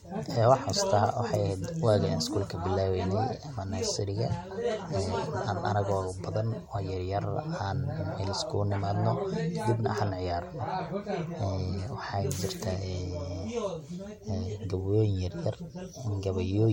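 Throughout this speech recording the sound is swirly and hollow, with smeared, blurred attacks and nothing above about 16.7 kHz. This is likely generation loss: about three successive MP3 encodes, consistent with 64 kbit/s, each re-quantising on a fresh frame grid and stacking artefacts.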